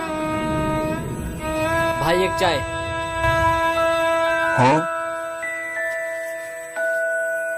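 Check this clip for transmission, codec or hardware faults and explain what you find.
One hardware fault is present: USB whine, running through the whole clip. A fixed-pitch tone sits at 8 kHz, strongest at its 16 kHz multiple, about 15 dB below the audio. The USB bus draws current in 125-microsecond microframes, and that pulsing leaks in through power or ground. Mains hum sits low, at 50 or 60 Hz and its harmonics. This whine is high, steady and locked to multiples of 8 kHz.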